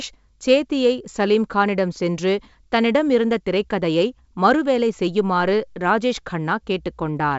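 No audible technical faults.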